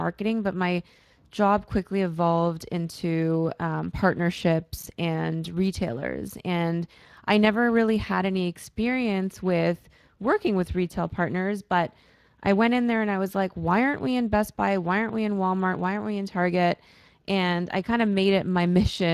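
From start to finish the speech carries Speex codec damage: plainly hoarse and noisy, with nothing above 15.3 kHz, which fits a bitrate around 22 kbps.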